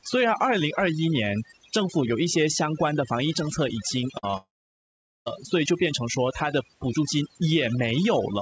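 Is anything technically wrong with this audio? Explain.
Yes, there are a few problems, mostly bunched up in the middle of the speech.

Overdone noise removal runs the whole way through. The noise reduction is set so hard that any frequency band near the noise level gets pushed down or dropped, and quiet bits of the voice go too. The background turns to near-silence with twinkly specks.

Around 4.18 to 4.25 s there's a burst of packet loss. About 60 ms of audio never made it, and the receiver stretched the last sound for about 50 ms while fading it. That comes across as a short held buzz or fading hiss, and then the speech jumps ahead.

Right after, from 4.31 to 4.35 s, there's a short concealed packet loss. About 20 ms went missing and was patched by carrying the previous sound forward and blending back in. It's a quick smear or wobble, and a brief consonant may just disappear.

From 4.37 to 5.28 s it sounds like a long network dropout is the likely cause. 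The last sound is extended as a buzz or hiss that dies away, leaving about 0.8 s of silence, and the speech comes back later with about 0.9 s missing. Separately, the call-codec band limit means nothing is heard above 8 kHz.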